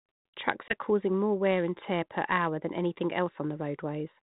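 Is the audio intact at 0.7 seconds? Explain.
No, there's a short dropout there. From about 0.69 to 0.73 s you get packet loss on an ADPCM call: roughly one 20 ms packet goes missing and is filled with silence, so there's a hard-edged gap. Because the G.726 decoder's adaptive predictor and step size lose track of the sender's while the packet is missing, the speech comes back with a bit of distortion, then settles within some tens of milliseconds.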